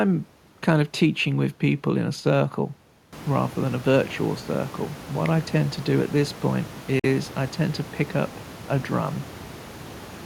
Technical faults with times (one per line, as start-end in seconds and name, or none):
6.99-7.05 Bluetooth dropout